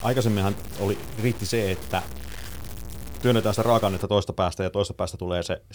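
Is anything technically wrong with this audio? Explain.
Yes. From the start to 4.03 s, just before "toista päästä ja", the speech carries grainy distortion that follows its level, with the quietest parts dropping to silence or sputtering. This is likely low bit depth without dither, fitting about 5-bit truncation, with error only about 15 dB down. Unlike dithered noise, it isn't a steady hiss.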